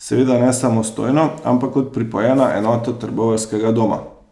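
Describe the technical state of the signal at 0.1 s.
At 0.1 s the speech signal is intact, with no audible fault at that moment.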